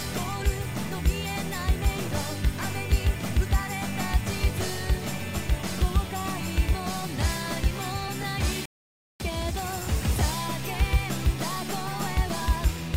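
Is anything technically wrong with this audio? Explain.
Yes. A rebuffering stall occurs from 8.66 to 9.20 s. The player exhausted its downloaded audio and had to halt playback until more data arrived from the network. The sound drops abruptly to silence for about 545 ms, then picks up at exactly the point where it stopped, with nothing skipped or repeated. No content is lost, but the gap stretches the timeline, so everything after 9.20 s arrives roughly half a second late.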